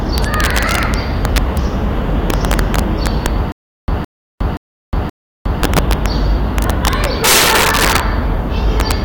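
Integer overflow runs through the whole clip: the level is driven about 11 dB past full scale, and instead of being limited, the roughly 1.5 percent of samples that exceed the maximum wrap to the opposite sign, turning each loud peak into a violent crack far harsher than clipping.

Stutter with silent gaps appears from 3.52 to 5.62 s. A 164 ms fragment repeats four times, each followed by 360 ms of digital silence, giving an even 525 ms cycle. This likely comes from a stalled stream replaying its last buffer on each retry, and the sound meant for that span is lost.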